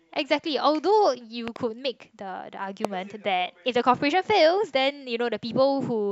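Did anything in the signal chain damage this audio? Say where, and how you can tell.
Yes. Loud pops sit on top of the speech, which carries on underneath them. There is a pair of sharp pops in quick succession between 1.48 and 1.58 s, about 10 dB above the signal. A single, stronger pop, about 15 dB above, follows at 2.85 to 2.87 s. These are brief voltage steps added to the signal, most likely in the analogue wiring from a loose plug, a switch or static discharge.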